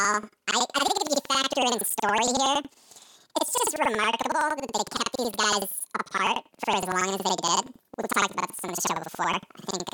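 Throughout the speech, planar audio read as interleaved makes each 93 ms block play twice at double speed, left then right. The voice sits an octave high with a 10.8 Hz flutter, fitting a 4096-sample block, but unlike a sample-rate error, the pace stays normal.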